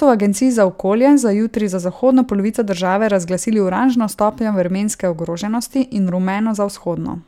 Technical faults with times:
none

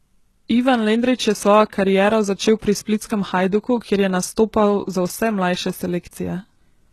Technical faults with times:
0.00-6.93 HE-AAC compression

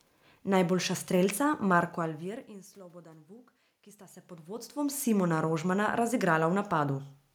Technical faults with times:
none

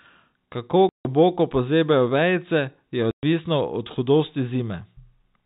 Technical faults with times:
0.89-1.05 packet loss filled with silence
3.11-3.23 packet loss filled with silence

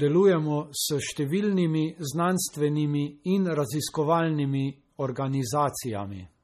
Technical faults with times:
0.00-6.43 MP3 compression

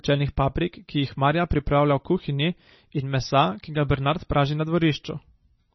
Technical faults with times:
0.00-5.74 MP3 compression

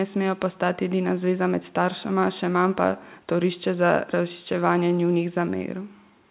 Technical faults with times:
none

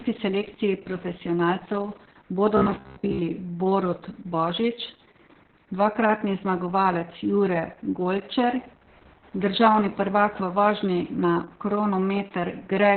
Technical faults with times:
0.00-12.97 Opus voice compression
2.57-3.19 robotic sound from repeated short buffers

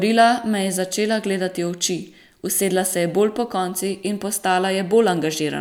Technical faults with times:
none

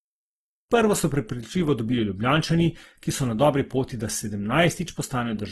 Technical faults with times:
0.00-5.51 Opus compression

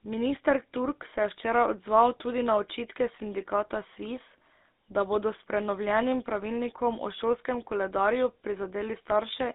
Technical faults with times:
0.00-9.54 GSM full-rate codec

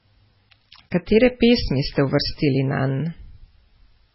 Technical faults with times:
0.00-4.14 MP3 compression

